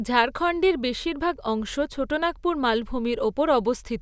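No technical faults can be heard anywhere in the recording.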